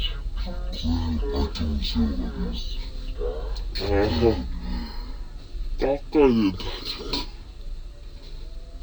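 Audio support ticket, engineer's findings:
Stereo read as mono, whole clip. Playback at half speed (0.5x), pitch down 12 semitones, one full octave. Probable component: decoder or file reader treating the interleaved two-channel stream as one channel. Left and right samples play back in sequence, doubling the duration. Faint mirrored image present in the upper half of the spectrum. Check the channel-count field in the header and the reader's format negotiation.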